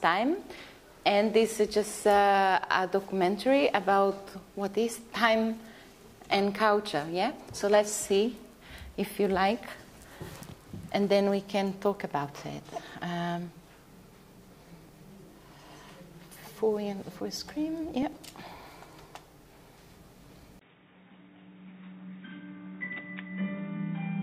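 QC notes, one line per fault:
18.03–19.81 s, periodic USB or driver dropouts: about twenty regular ticks, one every 0.099 s, each where roughly a millisecond of audio is skipped. The waveform shows small step discontinuities, and the spectrogram shows thin, evenly spaced vertical broadband lines.
20.59 s to end, input switched to a poorer device: after a 20 ms gap the sound turns dull and boxy, likely from a change to a lesser microphone. The spectrogram is empty above 3.8 kHz, the waveform drops about 5 dB, and a new noise floor sits about 40 dB below.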